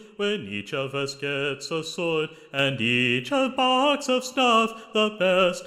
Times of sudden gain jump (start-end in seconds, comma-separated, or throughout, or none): 2.59-5.67